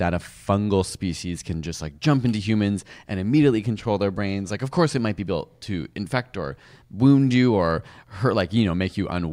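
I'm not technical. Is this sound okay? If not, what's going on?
Yes, this sound is okay, with no technical faults to point out. It's a speech recording, and nothing in it shows any problem that needs fixing.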